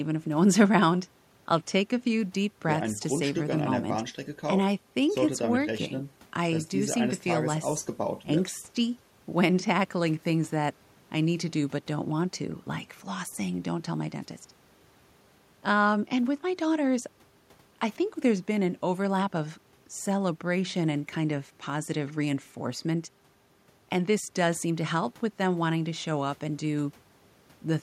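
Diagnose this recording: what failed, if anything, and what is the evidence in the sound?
Nothing failed in this recording, and the sound gives no evidence of any fault.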